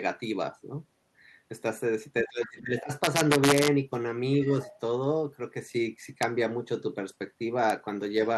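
From 2.22 to 2.87 s the speech is pulled down by about 20 dB over roughly half a second. This is speech suppressed in double talk, likely caused by the echo canceller turning down the near talker while the far side spoke.

Between 3.04 and 3.68 s, peaks driven about 3 dB past full scale produce integer overflow. Instead of being limited, the samples wrap to the opposite sign, giving violent cracks rather than the flattened buzz of clipping. Single snaps at 6.23 s and 7.70 s come from peaks just reaching the limit and wrapping the same way.

From 4.62 to 4.79 s a faint second voice sits about 20 dB below the main speech. This is the other side's voice leaking through, likely from loudspeaker echo the canceller failed to remove. It is a separate talker rather than a reverberant tail of the main voice. Throughout, the call codec's coding noise and a top end stopping near 12 kHz are audible.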